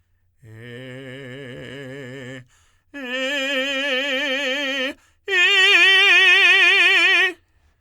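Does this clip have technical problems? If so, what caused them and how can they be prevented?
No, this music clip has no audible technical faults, and the signal holds steady throughout with nothing that needs fixing or preventing.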